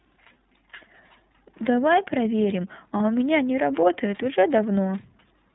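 iLBC codec coding, throughout the clip: the speech passes through a narrowband VoIP codec that cuts everything above 4 kHz and codes each frame's excitation independently of the frame before it. The damage is plainly audible. The speech has a dull, band-limited quality with a slightly rough, synthetic grain, which fits iLBC's 13.33 kbps mode with 30 ms frames.

Lost iLBC frames, at 1.32 s and again at 2.97 s: each gap lasts about 30 ms, consistent with a single lost frame. The decoder fills the hole by repeating the last pitch cycle blended with noise, so each dropout sounds like a brief held, faintly buzzy vowel rather than silence. Because iLBC frames don't depend on their predecessors, decoding resumes cleanly with the next frame after each gap.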